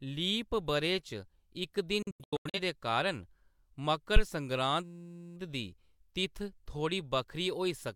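A speech recording with three technical faults. From 2.02 to 2.60 s the sound drops out in several quick holes spread over about half a second, each cut with a fast fade of around 3 ms, the longest gap about 85 ms, before it resumes at "दे कारण". This is a digital broadcast dropout: the receiver muted whenever frames failed, and about 0.34 s of the programme is simply gone. At 4.16 s a short, deep phantom power thump lands and dies away within about 14 ms. It is the low-frequency step produced when a supply switches on a live input and passes through the coupling capacitors. From 4.84 to 5.36 s the audio turns into a steady buzz at 172 Hz, one 5.8 ms fragment repeating about 90 times. That is a system hang loop: the host stalled while the hardware kept replaying the same ring buffer, which fits a 256-sample buffer, and little or no programme is lost around it.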